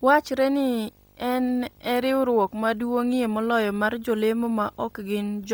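From start to finish a video or display buzz sits under the speech, around 35 dB down: a 50 Hz buzz at the picture's field rate with hash above it and a 15.6 kHz whistle at the line rate. That whistle and hash set it apart from plain mains hum.

Throughout, the speech also carries a heavy breathy, grainy edge, with the upper spectrum turned to noise and nothing above 20.2 kHz. The likely cause is Bluetooth LC3 compression at a low bitrate, which fits about 32 kbps with 10 ms frames, rather than MP3-style swirling.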